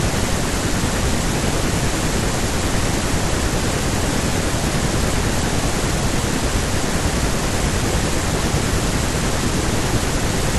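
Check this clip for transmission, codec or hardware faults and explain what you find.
No transmission, codec or hardware faults can be heard in the speech; the signal stays continuous and steady in level, bandwidth and timing throughout.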